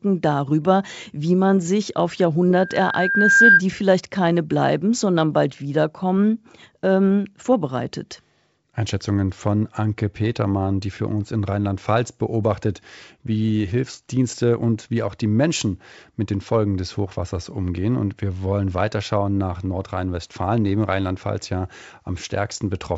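A microphone picked up its own loudspeaker, causing loudspeaker feedback squeal. From 2.52 to 3.62 s, after "wie man sich auf", a 1.6 kHz tone swells over about a second to around 10 dB above the speech.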